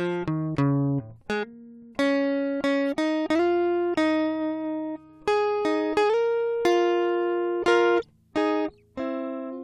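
The music carries no audible technical faults at any point.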